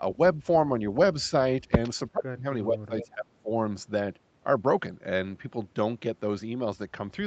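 The speech dips in level at 0.0 to 0.21 s, 1.28 to 1.32 s and 1.64 to 1.72 s, by about 5 to 10 dB. Deeper cuts follow at 2.09 to 2.45 s and 2.67 to 3.5 s, of about 30 and 25 dB. This is likely speech suppressed in double talk. An echo canceller turned everything down while both sides spoke.

At 3.0 to 3.07 s, a brief delayed copy of the speech appears, lagging by about 441 ms. It sits about 15 dB below the speech. This is likely an echo leak: a loudspeaker's sound reached the far microphone and was sent back.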